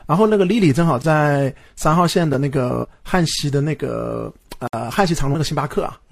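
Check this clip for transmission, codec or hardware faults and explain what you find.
Three blocks of digital silence break up the speech: 1.02 to 1.04 s (20 ms), 3.36 s (about 6.5 ms) and 4.67 to 4.73 s (60 ms). The signal drops abruptly to silence and returns with no fade: a short hole, then a tick, then a short hole.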